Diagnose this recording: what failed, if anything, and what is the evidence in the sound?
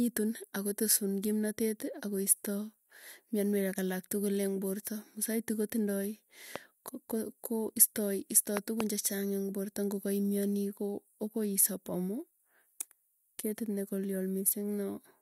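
The failure is a loud pop at two points, most likely an electrical transient in the analogue wiring or a switch, such as a plug or static discharge. At 6.56–6.58 s, just after "porta musaiti kotindoi", one sharp pop rises around 15 dB above the speech. Between 8.57 and 8.83 s, after "ko istoi" and before "chechang eng' porta", two pops land about 20 dB over the speech, which continues underneath. A waveform shows tall isolated spikes; a spectrogram shows thin full-band vertical lines.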